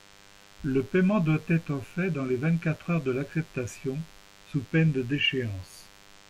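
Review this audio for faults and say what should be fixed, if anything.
A thin, steady buzz sits well below the speech throughout: DECT cordless phone buzz, from 100 Hz radio bursts rectified by the audio circuitry. Move DECT handsets and base stations away from the recording chain, and use shielded cabling.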